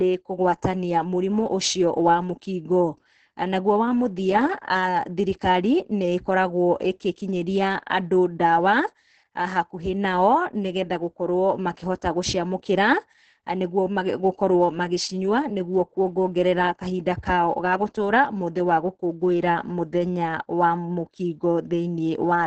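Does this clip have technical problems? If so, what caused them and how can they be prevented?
Yes. Opus voice compression damages the speech throughout. Nothing is heard above 9.3 kHz. The SILK coder models the voice coarsely, so speech sounds muffled, hoarse and slightly robotic. This points to a very low bitrate, around 10 kbps. To prevent it, encode with Opus at a higher bitrate.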